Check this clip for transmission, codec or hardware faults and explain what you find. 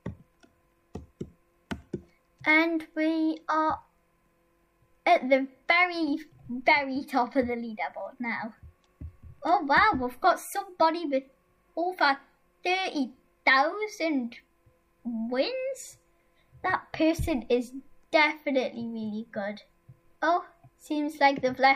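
Nothing wrong can be heard anywhere in this clip.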